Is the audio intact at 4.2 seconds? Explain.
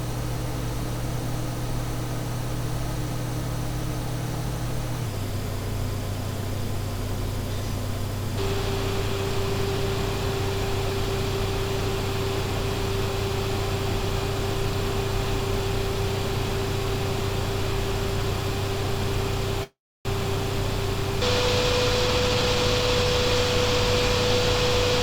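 Yes, the audio at 4.2 seconds is intact, with no dropout, click, distortion or other fault audible at that moment.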